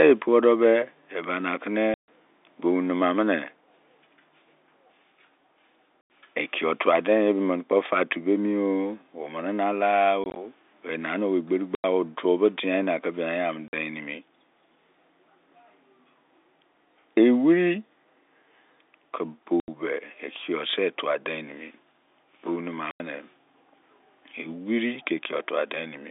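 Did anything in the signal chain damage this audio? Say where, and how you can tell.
Yes, in the network: packet loss filled with silence. Gaps at 1.94, 6.01, 10.24 (scattered), 11.75, 13.68, 19.6 and 22.91 s (after "bou nema") last 50 to 140 ms, fitting 10 ms packets. The waveform drops to silence, and the spectrogram shows blank vertical slots with hard edges.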